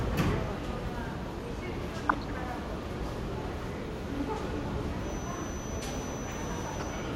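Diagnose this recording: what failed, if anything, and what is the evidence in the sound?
Two short bursts of burbling sit over the sound, from 2.09 to 2.30 s and again from 6.80 to 6.94 s. This is DAB burbling, a reception and codec fault. Weak reception let a small fraction of bit errors, well under one percent, slip past error correction into the MP2 stream. Corrupted samples then put short blips of noise into individual sub-bands. The durations suggest roughly ten and six frames were hit.

From 4.96 s to the end, a thin 6 kHz whistle runs behind the sound, about 15 dB below it, swelling and fading slowly in level without building up. This is a feedback whistle, likely from an acoustic loop between a loudspeaker and the microphone held just at the edge of instability. That lets this single high frequency ring on continuously rather than howl, pointing to the analogue capture path rather than the digital chain.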